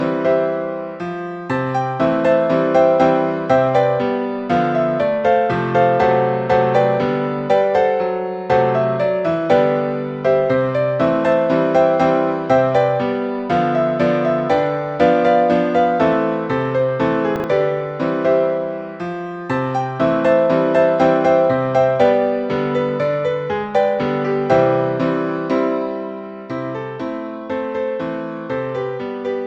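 Chunks out of order occur at 17.36 to 17.44 s, where a 40 ms chunk of audio plays one chunk late, after the segment that should follow it. No audio is lost, but the swap leaves three hard joins, heard as a brief jumbled moment.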